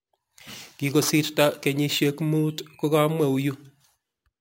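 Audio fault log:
throughout imaging from sample-and-hold upsampling: samples were repeated without a smoothing filter, consistent with a rise from about 22 kHz to 44.1 kHz. A mirrored copy of the speech spectrum fills 11 kHz to 22 kHz, about 20 dB down, heard as metallic fizz following the speech's level.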